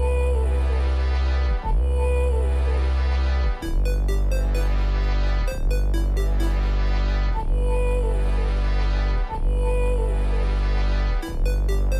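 No technical faults can be heard anywhere in it.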